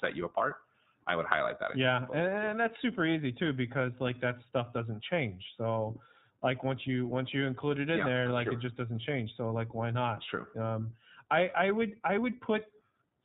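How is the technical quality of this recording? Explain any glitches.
Technical quality is limited by one fault across the whole speech recording. Throughout, it sounds band-limited, rough and synthetic, consistent with the iLBC codec: narrowband coding drops everything above 4 kHz, and each short frame's excitation is coded independently, which fits 20 ms frames at 15.2 kbps, leaving plainly audible damage.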